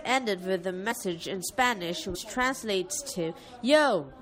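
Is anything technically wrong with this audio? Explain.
Yes. There are compressed frames skipped at 0.90 s and at 2.14 s. Whole blocks of coded audio were never played, so the speech jumps ahead by about two frames (roughly 40 ms) at the first point and about five frames (roughly 100 ms) at the second. That fits frames of 21.3 ms. A waveform shows an abrupt change in envelope, and a spectrogram shows a discontinuity in harmonic tracks.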